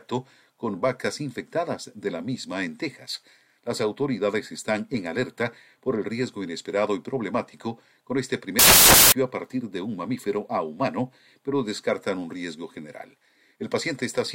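From 8.59 to 9.12 s, samples are built from the wrong bytes. Misassembled bytes turn low-order noise into the main signal. It bursts out as loud, harsh broadband noise.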